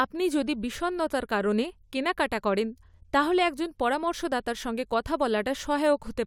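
Nothing in this speech recording stands out as a technical problem; it simply runs along without any glitch worth pointing to.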